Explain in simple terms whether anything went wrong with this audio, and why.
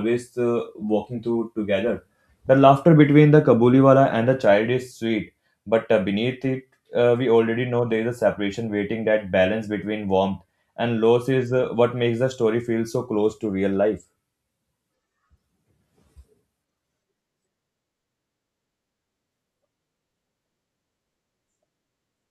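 Nothing went wrong here: the speech recording holds steady throughout, with no dropouts, gaps, glitches or sudden changes in the sound anywhere along its length.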